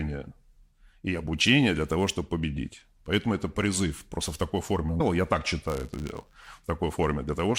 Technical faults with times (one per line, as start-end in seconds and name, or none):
4.99 damaged data in a compressed stream
5.67-6.48 buffer tearing